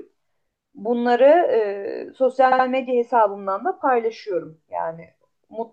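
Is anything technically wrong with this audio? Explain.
Yes, there's one clear glitch. At about 2.51 s, running to 2.65 s, the speech hits a stretch of repeated frames. A 72 ms chunk of compressed audio got written or sent more than once, so the decoder plays that same slice twice more in a row. You hear a quick stutter, a tiny piece of speech looping, and the clip runs 144 ms longer than it should. A 72 ms block fits a run of roughly three codec frames.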